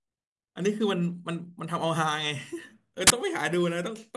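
At 3.07 to 3.10 s the speech is cut by a burst of file tags played as audio. Compressed picture data is being read as samples, giving about 30 ms of very loud white noise. It shows as a hard-edged rectangular block on the waveform and a flat, full-band vertical stripe on the spectrogram.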